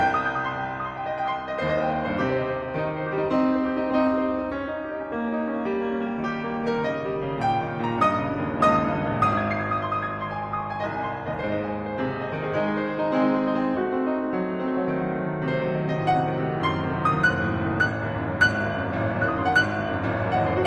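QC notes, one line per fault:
No faults were heard in this music clip. It has passed through a WebRTC call path, and the sound tops out near 12 kHz with the usual coding texture of a low-bitrate Opus setting.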